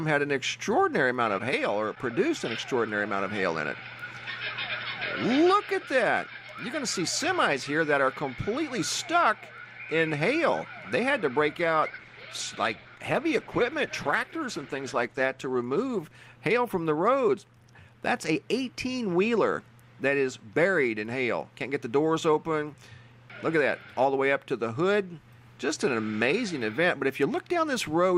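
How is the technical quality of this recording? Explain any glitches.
One glitch stands out. From 11.57 s to 20.01 s the sound turns rough and watery and loses its top end, worst for about 3.6 s. This is a call bitrate drop. Fewer bits forced coarser coding and a lowered cutoff, which fits a fall from about 96 kbps to about 14 kbps.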